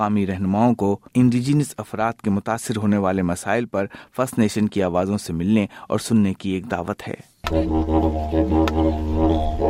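No technical faults can be heard in the clip. There is nothing here that needs a time marker or further explanation.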